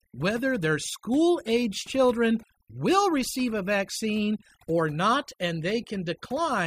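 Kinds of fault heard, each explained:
overdone noise removal: Speech over a near-silent background flecked with twinkling specks, because heavy noise reduction shuts off frequency bands near the noise floor throughout.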